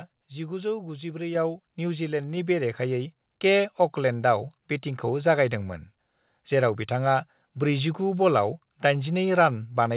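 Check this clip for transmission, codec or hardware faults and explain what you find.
The clip has one fault, a microphone volume stepped up, occurring three times, all heard through a call path whose sound stops at 4 kHz, as G.711 A-law telephony coding would.

At 1.35, 2.37 and 3.39 seconds, speech and background noise jump louder together, by about 5 dB, then about 3 dB, then about 2 dB. The call software judged the microphone too quiet and raised the device's input volume in abrupt steps rather than a smooth ramp.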